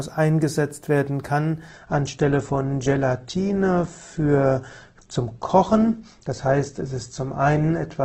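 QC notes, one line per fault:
1.69 s to end, adaptive stream at a lower bitrate: sudden switch with no gap, nothing above 8.2 kHz, smeary codec artefacts, which fits a drop from roughly 64 to 12 kbit/s Opus.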